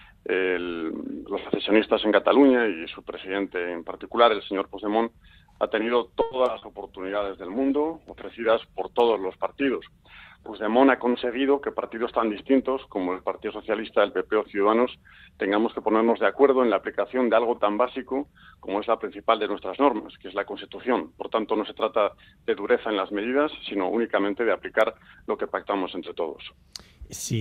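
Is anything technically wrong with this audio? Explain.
Yes, four separate transmission faults occur in quick succession.

From 6.21 to 6.43 s there is a call audio freeze. The last sound carries on for about 100 ms as a fading buzz, then the sound resumes where it left off, now 100 ms late, with nothing lost. The likely cause is delayed packets draining the jitter buffer. On a spectrogram the final frame's spectrum smears horizontally and dims before normal detail returns.

At 6.58 to 6.64 s comes a short concealed packet loss. About 40 ms never arrived, and the receiver extrapolated from the preceding sound before crossfading back. It is heard as a brief smear or wobble. The waveform shows a repetitive, slightly decaying patch in place of the real detail.

From 7.02 to 10.58 s there is a call bitrate drop from 64 to 18 kbps, which holds at its lowest for about 3.5 s. The encoder quantises coarsely and trims the top band, so the sound turns muffled and watery. 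On the spectrogram the upper frequencies vanish above a flat ceiling, and the texture looks blotchy.

Between 11.14 and 12.69 s a jitter buffer speed-up plays the sound at about 106% speed, with pitch unchanged. The receiver cut short pitch-period slices, about a tenth of a second in total, to shrink its backlog, which makes that stretch sound hurried. Spectrogram events crowd slightly closer, and the waveform shows small splice points.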